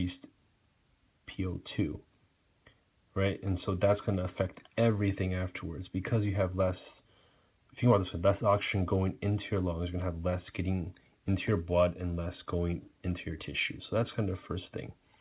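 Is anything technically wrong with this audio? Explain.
No, nothing is technically wrong: the audio sounds like a normal narrowband call path with no content above about 4 kHz, which fits G.711 mu-law at 64 kbps, and no faults can be heard.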